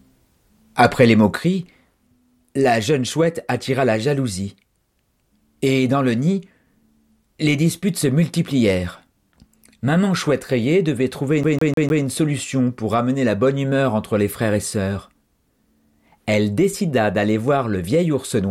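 At 1.36 s the level drops abruptly by about 6 dB and stays down to the end. That's the classic sign of one channel dropping out, likely one side of the stereo pair going dead before the mono sum. Anything that sat in both channels loses half its contribution, so the speech just gets quieter in one step. Anything that lived only in the lost side would vanish.

Then from 11.43 s to 12.04 s there's a CD stuck on one turn. A scratch kicks the laser back a track at the same point each revolution, so a 151 ms slice of the speech replays four times, with a tiny mute at every jump. You get that quick, mechanical stutter you'd know from a skipping disc, tight and evenly spaced, before playback carries on.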